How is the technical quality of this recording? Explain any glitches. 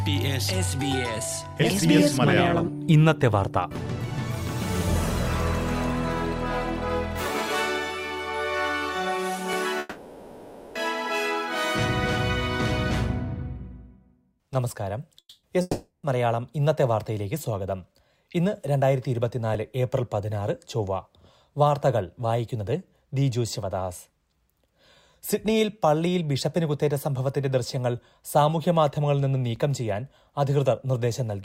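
The recording has two kinds of fault: brief stutters from overlapping chunks and three gaps that sound like a long network dropout.

At 9.53 s, 19.55 s and 29.56 s there is a tiny click or hiccup. These are overlapping chunks. The audio was handled in 5-second pieces, and each piece began slightly before the previous one ended, so about 7 ms of sound plays twice at the join. That doubled sliver breaks the flow and is heard as a quick stutter.

From 9.79 s to 10.78 s the sound gives way to a fading buzzy continuation for about 960 ms, and then resumes further along with that stretch gone. At 15.19–15.46 s the fill lasts about 240 ms, ending in about 110 ms of silence. At 15.61–16.06 s the fill lasts about 420 ms, ending in about 140 ms of silence. These are likely long network dropouts. When packets stopped arriving, the receiver extended the last sound to cover the gap, and in the later two it then went quiet. 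Playback picked up later without the missing audio.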